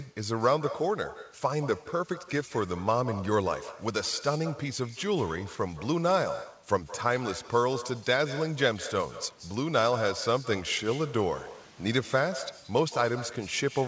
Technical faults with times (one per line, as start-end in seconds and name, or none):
0.00-13.88 echo with no canceller